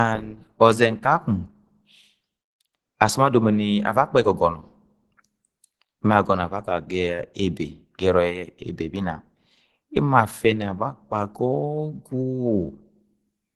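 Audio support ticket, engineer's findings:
Low-bitrate audio saved at a high bitrate, throughout the speech. Symptom: low-rate coding artefacts from the first encode despite a large file. Nothing above about 20.3 kHz. Likely component: upstream speech codec in the chain. Mechanism fits a roughly 16 kbit/s Opus pass re-encoded to MP3 at 192 kbit/s. The second encode cannot restore detail the first discarded.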